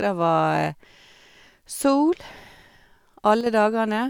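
One channel drops out from 3.41 to 3.46 s. The speech dips abruptly by about 6 dB, likely because one stereo channel briefly went silent.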